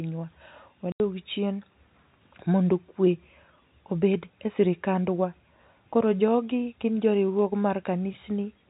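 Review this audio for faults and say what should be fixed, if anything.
Packet loss filled with silence at 0.92 to 1.00 s: an 80 ms hole with hard edges, which fits four lost 20 ms packets. Add packet loss concealment and a jitter buffer so gaps are bridged rather than muted.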